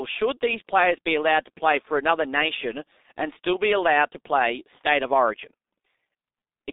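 The speech has passed through a G.723.1 codec, an early internet-telephony coder that works in 30 ms frames at a very low bitrate. The heavy smearing fits roughly its 6.3 kbit/s mode. Throughout, the band is confined to about 200 Hz to 3.7 kHz, so the voice sounds muffled and thin. Because the coder's voice model updates only slowly, the timbre turns hoarse and consonants blur into one another.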